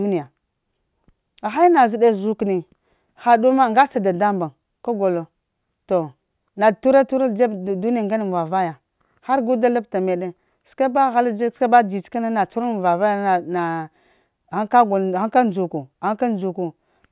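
Speech recording with no audible technical faults anywhere in the clip.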